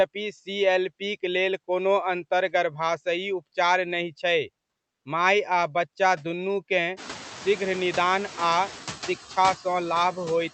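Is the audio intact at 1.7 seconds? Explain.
No. At 1.7 seconds the speech carries noise suppressor artifacts, which run through the whole clip. The suppressor treats the steady room noise as something to remove. It pulls down each band it judges to be noise, frame by frame, by about 12 dB. The noise floor dips in the gaps and comes back under the speech.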